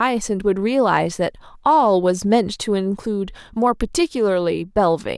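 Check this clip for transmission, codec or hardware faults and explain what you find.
No transmission, codec or hardware faults turn up anywhere in this speech clip.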